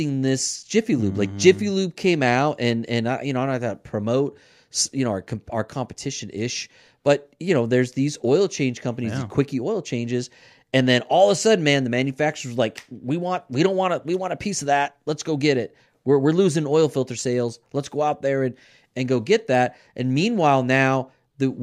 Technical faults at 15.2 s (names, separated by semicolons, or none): none